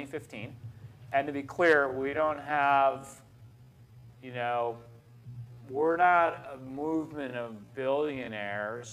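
From 1.79 s to the end at 8.92 s, the audio abruptly slows to about 0.54 times its pace at unchanged pitch, so it drags, likely a time-stretched section. A spectrogram shows the same frequency bands drawn out horizontally.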